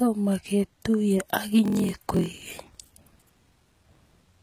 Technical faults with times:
0.00-4.42 HE-AAC compression
1.63-4.16 block size mismatch (padded)

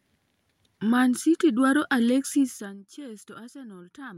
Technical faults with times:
none

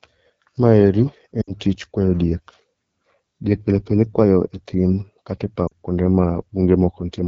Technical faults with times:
0.00-7.28 AMR wideband (HD Voice) codec
1.41-1.54 lost AMR speech frames
5.67-5.73 lost AMR speech frames

